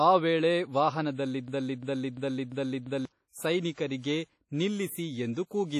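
The speech carries heavy WMA compression damage the whole way through, with a washy, ringing quality and hiss that breathes along with the signal. Nothing sits above 16.5 kHz, which fits a low bitrate around 32 kbps, and weak detail gets zeroed in the long transform blocks.

From 1.48 to 3.05 s there's a broken-record loop: a 0.35 s fragment plays five times, back to back and identical. The likely cause is the player or stream stalling and resending the last chunk it held, so the audio meant for that stretch is gone.

At 3.75 s there's pre-echo. A sharp attack arrives after about 28 ms of hiss, and the onset sounds softened. The codec spread its quantisation noise across the whole block, so noise sized for the loud attack bled into the quiet moment just before it.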